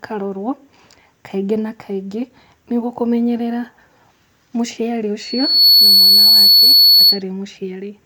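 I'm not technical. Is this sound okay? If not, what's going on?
No. At 5.19 seconds a loudspeaker feedback squeal starts: a microphone is picking up the speaker it feeds, and the sound loops round and round, getting louder each pass. Over about half a second it swells into a sharp, steady whistle around 4.4 kHz that rises well above the speech. It lasts until 7.21 seconds, when the whistle stops.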